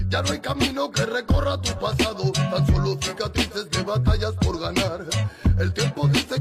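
Listening through the audio, nothing stood out as a technical problem at any point.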